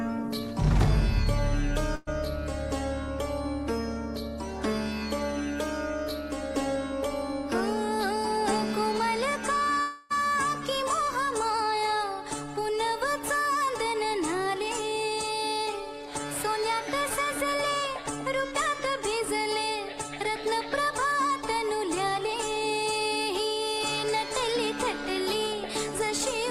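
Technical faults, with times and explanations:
1.95 to 2.09 s, burst of packet loss: A short run of audio never arrived in time. The receiver stretched the last sound across the hole, fading it as it went. About 113 ms is this smeared fill. Then playback resumes, with 120 ms skipped.
9.81 to 10.12 s, long network dropout: The last sound is held and fades over about 294 ms. It never falls to silence. The audio then picks up again, with 300 ms missing. The likely cause is a long network stall where no packets reached the receiver.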